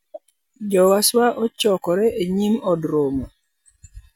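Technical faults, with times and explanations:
Nothing in this speech recording stands out as a technical problem; it all sounds the way it should.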